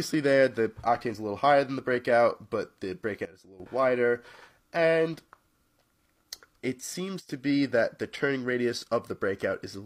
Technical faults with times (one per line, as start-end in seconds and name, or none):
3.25-3.60 sudden gain jump
7.20-7.29 sudden gain jump